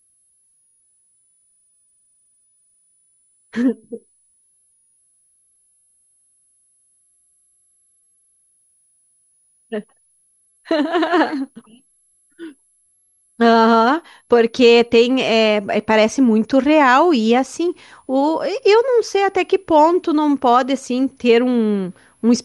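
Throughout the speech a switching supply whistle sits high above it, a thin tone near 10 kHz, roughly 45 dB below the speech. A switching power supply is running in an audible burst mode or beating with another one, so its pitch wanders as the load shifts, moving between 9.88 and 11.15 kHz. On a spectrogram it appears as a narrow line running the full length, drifting within that band. It is far too small to see on the waveform.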